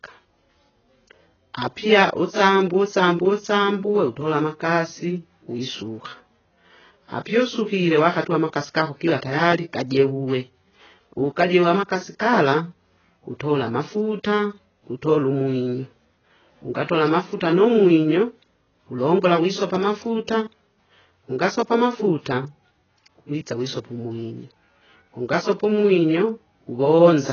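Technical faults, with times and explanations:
Throughout, AAC compression: the speech has nothing above 6.8 kHz and is heavily damaged, with a dull, smeared sound and a warbling, fizzy texture on sustained vowels and sibilants. The likely cause is AAC-LC coding at a very low bitrate, around 12 kbps, which drops the high band and starves the rest. What separates it from a simple low-pass filter is the swirling, unstable detail inside the remaining band.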